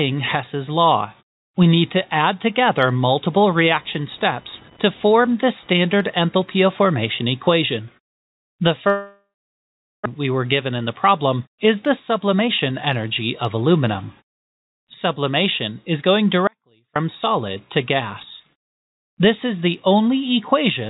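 From 3.52 to 6.43 s a computer activity noise sits under the sound: a buzzing chirp pulsing at roughly 1 kHz, about 30 dB below the signal. Load swings in the computer are shifting the audio circuit's shared ground. What sets it apart from codec grit is that it starts and stops on its own schedule, unrelated to what the audio is doing, and it stays within the band below 4 kHz that the G.711 call path passes.

At 8.88 s a long network dropout begins and lasts to 10.08 s. The last sound is stretched into a buzz that fades, then about 0.79 s of silence follows, and the audio resumes with roughly a second of material gone. The likely cause is a stall in packet arrival that pushed the delay up by something like 150 ms. Unlike a simple cut, the gap starts with a synthetic, decaying continuation, and the content afterwards has skipped ahead.

Two jitter buffer speed-ups follow as the receiver sheds that built-up delay. 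From 10.71 to 11.09 s playback runs at 110 %, dropping around 40 ms. From 12.11 to 13.63 s it runs at 107 %, dropping around 100 ms. Short pitch-period slices are cut out repeatedly, so the sound is hurried but keeps its pitch. That distinguishes it from resampling or a clock error, which would raise the pitch along with the speed.

From 16.47 to 16.96 s, about 0.48 s, an audio dropout to a faint residue occurs. The sound cuts off abruptly and leaves only a faint leak of itself, about 35 dB down, before cutting back in. The likely cause is a break ahead of a path that stayed live. Unlike the network dropout, there is no fading buzz and no true silence, and no material is skipped.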